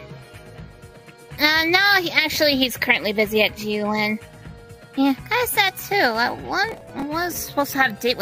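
Processor overload crackle from 6.69 to 7.37 s: around ten missed buffers of about 5 ms each repeat stale audio, appearing as hard-edged waveform steps and thin broadband vertical streaks on a spectrogram.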